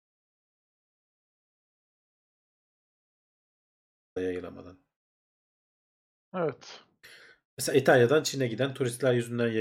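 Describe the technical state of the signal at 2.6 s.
At 2.6 s the signal sits inside an audio dropout to silence that is already under way when the clip begins and lasts until 4.16 s. The input was likely lost while recording continued, so this stretch is silent. Unlike a pause or a noise gate, no room tone or hiss remains at all.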